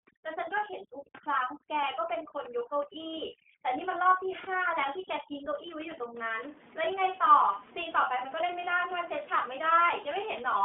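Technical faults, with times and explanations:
Throughout, iLBC codec: nothing passes above 3.7 kHz. Each 30 ms frame is coded separately, which fits the 13.33 kbps mode, so the speech sounds plainly rough and synthetic.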